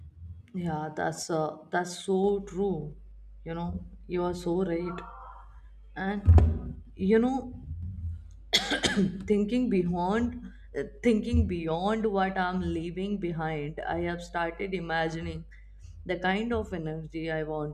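Speech recording with mains hum entering at 2.25 s, right after "yeah that's uh that's", and continuing to the end: a steady 50 Hz tone with low harmonics, around 20 dB below the speech, pointing to a ground loop or nearby transformer coupling the power line in.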